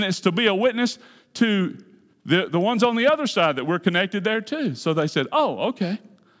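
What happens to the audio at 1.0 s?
Nothing goes wrong at 1.0 s; the speech runs through that moment intact, with no dropout, click or distortion.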